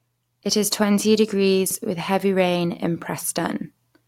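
Chunks out of order between 1.66 and 1.75 s, after "is twenty" and before "with heavy rain in": a 43 ms piece of speech plays after the piece that should follow it, which fits one chunk arriving a slot late. There are three hard joins, and the moment sounds jumbled.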